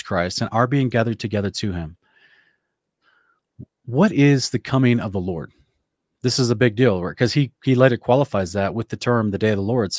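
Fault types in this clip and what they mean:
No technical faults are audible anywhere in the recording.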